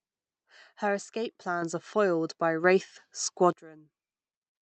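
At 1.62 s the call software, judging the microphone too quiet, raised the device's input volume in a single step of about 6 dB, then again at 2.64 s by about 4 dB. Each microphone volume stepped up event makes the speech and the background noise jump louder together, abruptly and without any ramp.

At 3.53 s a sudden gain jump cuts the level by about 20 dB and holds it there to the end. The likely cause is a digital gain change applied from one sample to the next rather than faded in. Speech and background drop away at the same instant, so the final second sounds much quieter, while the Opus call path's band limit near 8 kHz keeps its dulled top end.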